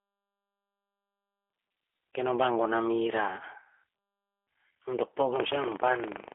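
Throughout, the speech carries G.729 codec damage. It is rebuilt from a vocal tract filter, a pitch predictor and sparse pulses, which fits an 8 kbit/s VoIP line. Nothing passes above 3.6 kHz, and the plainly rough, synthetic texture separates this from simple telephone band-limiting.

From 5.32 s to 6.34 s, buffer tearing adds a robotic buzz at 25 Hz. Writer and reader have slipped within the ring buffer, so a small slice of each period replays audio from about a tenth of a second earlier, with hard joins on both sides. Unlike dropouts, the signal never goes silent, and the rattle is heard only while speech is present.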